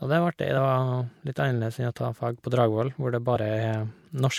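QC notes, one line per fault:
0.57 s and 3.35 s (the second just after "hvor det"), compressed frames skipped: at each point about one 24 ms frame of compressed audio never reaches the output, so the speech jumps ahead by roughly 20 ms. On a spectrogram, harmonics break and restart slightly shifted. The waveform shows an abrupt envelope step.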